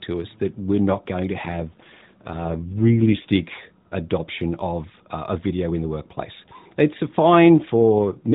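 From 1.46 to 3.29 s, just after "we're not going to", and again from 7.95 s to the end, an AMR rate drop makes the speech rougher and more synthetic with no gap, consistent with a 12.2 to 5.9 kbps switch.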